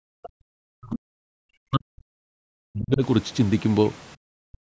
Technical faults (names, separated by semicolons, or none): speech suppressed in double talk